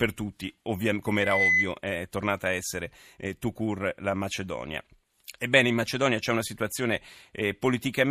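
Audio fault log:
1.06–1.76 s: loudspeaker feedback squeal. A single 2 kHz tone swells over roughly 0.4 s and ends about 5 dB above the speech. The microphone is picking up its own loudspeaker. At 2 kHz the loop gain exceeds one, so that tone keeps growing.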